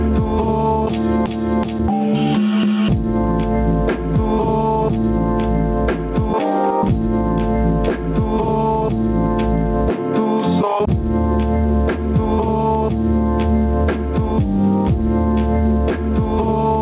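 Gain pumping runs through the whole clip. The gain swings by around 10 dB. Levels sound squashed. The likely cause is input gain set far too high, with a fast limiter clamping each peak. Nothing reaches above 4 kHz, which fits a narrowband G.711 call path.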